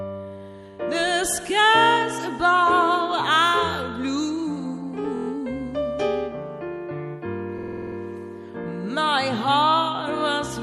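Throughout the audio quiet detail has a watery, swirling quality, with smeared attacks, likely the result of MP3 compression at a rate that fits about 64 kbps, where the encoder drops weak components frame by frame. Two stutters come from repeated frames: from 5.15 to 5.27 s a 24 ms block plays five extra times, adding 0.12 s, and from 7.57 to 7.96 s a 48 ms block plays eight extra times, adding 0.38 s.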